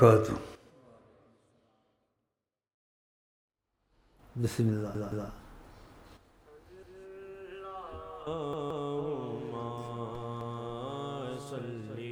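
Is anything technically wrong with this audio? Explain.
Yes, there's a repeated buffer problem, four times: at 4.95 s and 8.53 s a roughly 171 ms chunk plays three times in a row, and at 6.83 s and 10.41 s it plays twice. New audio didn't reach the device in time, so it replayed its last buffer, which fits an 8192-sample buffer. Each repeat has a hard join, so you get a short stutter rather than a click, and nothing appears to be skipped afterward.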